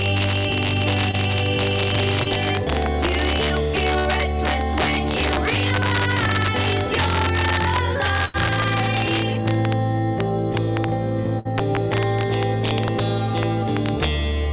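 Integer overflow runs through the whole clip. The level is driven about 2 dB past full scale, and instead of being limited, the loudest peaks wrap around to the opposite extreme of the range. Only a small fraction of samples, under one percent, cross that limit, but each one becomes a full-range jump. The result is sharp, violent cracks on the loud moments, harsher and more abrupt than ordinary clipping. They sit on top of a band-limited call sound with nothing above 4 kHz, which fits a G.711 mu-law path at 64 kbps.

Short concealed packet loss appears at 1.11–1.15 s and again at 2.23–2.27 s. Each time, about 20 ms of audio failed to reach the decoder. The receiver patched the hole by extending the preceding sound for roughly 20 ms, then cross-fading back into the real signal. Each gap comes across as a brief smear or wobble.

Bursts of packet loss follow at 3.99–4.07 s, 8.25–8.36 s and 11.39–11.47 s. 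These are longer runs of missing audio: about 60 ms, 80 ms and 60 ms. Concealment stretches the last sound across the gap and lowers it as the gap continues, about 60, 85 and 60 ms of fill respectively. Pitched material turns into a held buzz, and noisier material into a fading hiss. Playback then resumes further along, with the intervening audio gone.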